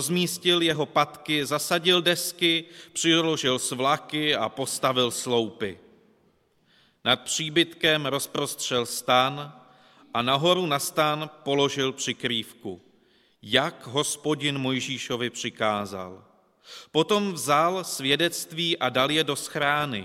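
Nothing stood out as a technical fault on listening.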